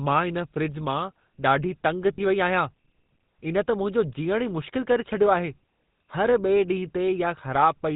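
From the start, the speech carries the buzzy, gravelly texture of the GSM full-rate codec, plainly audible throughout, consistent with its 13 kbps rate. The codec rebuilds the voice from a vocal-tract model excited by regularly spaced pulses, so fine detail is lost and nothing above 4 kHz survives. What separates this from ordinary band-limiting or low-bitrate hiss is the pulse-train roughness woven into the voice itself rather than sitting on top of it.

At 2.14 s, lost GSM frames cause a brief fault lasting about 40 ms, to 2.21 s, which fits two 20 ms frames going missing. The decoder covers the gap by repeating the last good frame's settings, so the sound freezes into a short, rough, metallic ring instead of dropping out. Unlike a plain dropout or click, the gap is filled with a smeared echo of the preceding sound, and it is too short to fade fully to silence.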